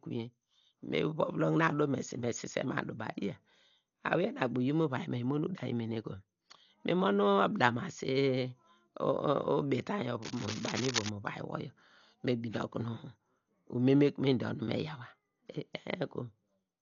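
It's a speech recording, and the whole thing sounds dull and boxed-in: nothing comes through above about 6.9 kHz, and there's a rough, fluttery noise clinging to the voiced sounds. That's heavy codec damage, most likely Dolby Digital compression at a very low bitrate, with the damage pointing to something around 48 kbps. At that rate the encoder cuts the top of the band and starves many frequency lines of bits, then the decoder fills the gaps with noise. On top of that, from 10.22 to 11.09 s there's a patch of dense, uneven scratching and rustling sitting only a little below the speech. That's cable scratch noise. The rapid contact changes in a worn cable or connector being moved are the likely cause, spitting irregular bursts of noise into the signal for nearly a second.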